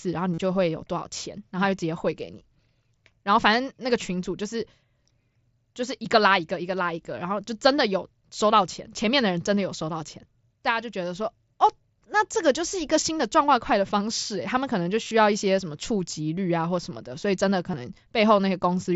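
A brief buzzy, held tone replaces the speech at 0.33 to 0.38 s, with a slight warble as the real signal comes back. Around 15.03 to 15.11 s there are shorter flickers of the same buzz, and a tiny hiccup at 17.72 s. This is concealed Bluetooth headset packet loss. Voice packets from the mSBC headset link were dropped, about 45 ms, 53 ms and 15 ms' worth. The receiver patched each gap by repeating the best-matching piece of the preceding waveform.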